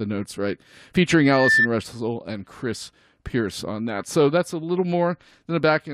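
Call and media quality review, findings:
Loudspeaker feedback squeal, 1.23–1.68 s. Acoustic loop: mic picking up the loudspeaker it feeds, loop gain above unity at 1.8 kHz. Single steady tone swells over roughly a third of a second, then sits about 5 dB above the speech.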